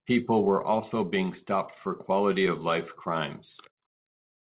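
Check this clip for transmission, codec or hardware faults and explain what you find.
No transmission, codec or hardware faults turn up in this clip.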